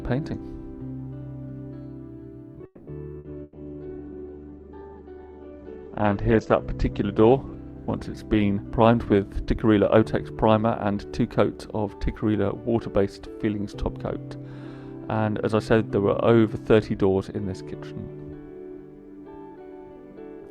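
At 2.65 to 2.90 s the audio stalls and the last sound is stretched into a fading buzz or hiss before resuming with nothing lost, likely a call audio freeze caused by held-up packets draining the jitter buffer. Two short dropouts follow, at 3.19 to 3.28 s and 3.43 to 3.58 s, where the sound smears into a decaying hold and then jumps ahead. These are bursts of packet loss, skipping about 60 ms and 120 ms of audio. From 3.29 to 10.45 s the sound turns rough and muffled as a call bitrate drop takes the encoder from 64 to 9 kbps and narrows the bandwidth from 20 kHz to 8 kHz, staying at its lowest for about 2.5 s. Between 8.53 and 10.03 s the audio hurries at unchanged pitch, running at 115% speed. This is a jitter buffer speed-up, trimming roughly a fifth of a second of pitch periods to reduce delay.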